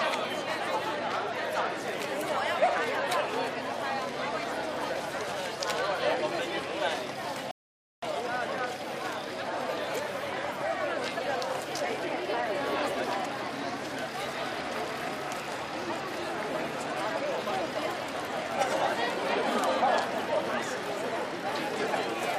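At 7.51 s the sound stops dead and falls silent until 8.03 s. This is a rebuffering stall. The player used up the audio it had downloaded before the next part arrived, so playback paused and waited. When data came in, the sound resumed at the exact point where it had halted. Nothing is skipped or repeated. The gap simply adds about half a second, 512 ms, to the running time.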